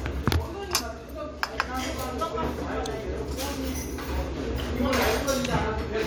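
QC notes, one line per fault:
Nothing to flag here, the audio runs along without a single problem worth noting.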